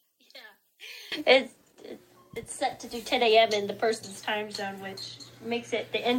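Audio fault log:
0.00–1.12 s, one channel inverted: the sound drops about 21 dB. Reversed polarity likely cancels shared content when summed to mono.
4.55 s, block of digital silence: a 1.45 ms dropout is heard as a tick or dip. The edges are abrupt with no fade, which fits a 64-sample block.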